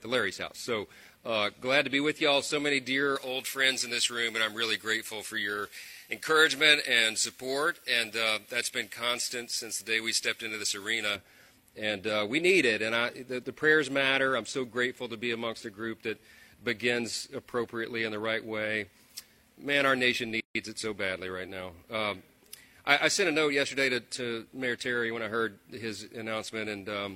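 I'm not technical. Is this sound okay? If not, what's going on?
No. From 3.16 to 11.16 seconds the sound turns thin, harsh and hissy, with sharp edges on every high sound. This is pre-emphasis left on: the treble was deliberately boosted for recording or transmission, and the matching step that should have turned it back down was skipped.

At 20.40 seconds a gap of about 149 milliseconds opens in the sound, then it resumes where it stopped. This is a gap at a join of encoded pieces: the recording was compressed in separate chunks and joined without trimming the bits of silence each chunk carries.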